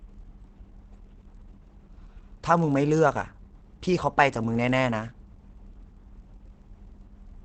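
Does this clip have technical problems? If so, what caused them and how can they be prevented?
Yes. Throughout the speech there is a buzz at about 43 Hz from a filter restarted on every block. Each block starts from silence, leaving a small click that fits a 1024-sample buffer. The waveform shows evenly spaced spikes, and the spectrogram shows faint vertical lines. Prevent it by carrying the filter state from one block to the next.

The speech also sounds muffled and hoarse, likely from heavy Opus compression at a low bitrate in its speech mode. The spectrogram shows nothing above about 8.6 kHz. Prevent it by encoding at a higher bitrate.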